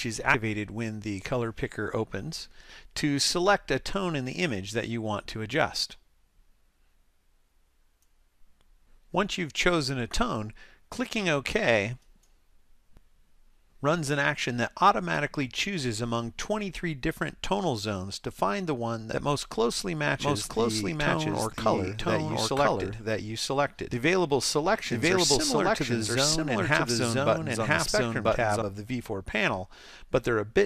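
A brief burst of corrupted sound, of the chirp, squawk, click or short-gap kind, breaks in between about 0.31 and 0.34 s, lasting roughly 30 ms. This is damaged data in a compressed stream: part of the encoded file was lost, blanked or overwritten, so the decoder could not read the frames at that point and fell out of sync. It then had to hunt for the next valid frame header before clean playback could resume.

From 20.20 s to 28.62 s, a second full-band copy of the audio runs about one second behind the original and at roughly the same level. It has no reverberant tail or room colouring, and it cuts in and drops out abruptly at both ends. This is a doubled audio track, most likely caused either by the same material being captured again through a slower path or by an edit that left two copies out of step.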